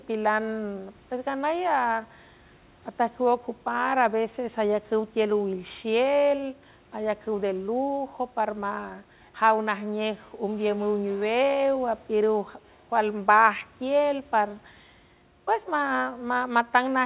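Nothing stood out on listening: the speech comes through a G.711 call path with its telephone band, nothing above 4 kHz, and faint room noise about 35 dB below the voice.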